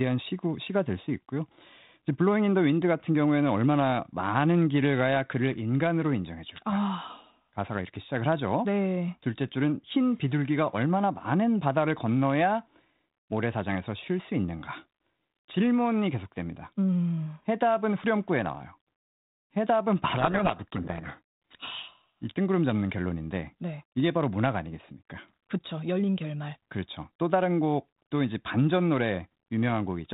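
Speech over a G.726 telephone link, band-limited below 4 kHz with only light coding hiss, which fits 32 kbit/s. From 20.18 to 22.09 s the speech is buried in harsh, grinding distortion. This is a codec payload misread. The decoder is reading the G.726 code words with their bits in the wrong order. Each 4-bit difference value is then wrong, so the adaptive prediction drifts into rasping noise. Clean decoding returns once both ends agree on the packing.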